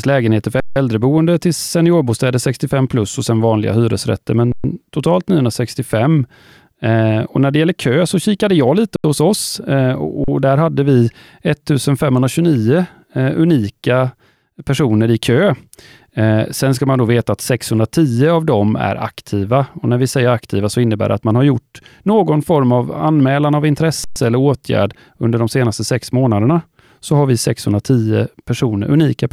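Underruns with held sample occur at 0.6, 4.52, 8.96, 10.24 and 24.04 s, lasting 160, 120, 80, 40 and 120 ms. Each time the buffer empties and the converter holds its last value, so the speech stops flat with little or no click, then resumes softly where it paused.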